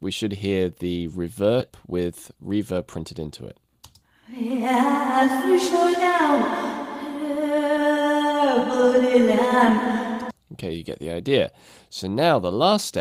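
At 1.60 s there's a skip ahead: playback jumps straight past about half a second of audio and lands on what comes next with essentially no gap. That stretch got dropped, either in transit or by the jitter buffer throwing it out when it overflowed while later audio was already queued up. You hear it as an abrupt splice, with the sound before and after stitched together almost directly and a chunk simply gone.

Right after that, from about 1.69 s to 2.97 s, there's a jitter buffer speed-up. The buffer was sitting on more audio than it wanted, so the receiver trimmed out short pitch-period-sized slices over and over to pull the delay back down, around a tenth of a second in total. The result plays at roughly 109% speed with the pitch unchanged, so that passage comes across as a bit rushed.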